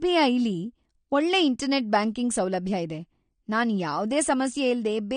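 Dull and smeared speech, with a warbling, fizzy texture clinging to sibilants and held sounds and no content at all above about 9.7 kHz, audible throughout the clip. This is AAC compression damage, plainly audible, and the likely cause is AAC-LC encoding at a low bitrate, which fits roughly 32 kbps. Starved of bits, the encoder pulled its cut-off down and coarsely quantised its frequency lines, leaving spectral holes that produce the smearing and swirl.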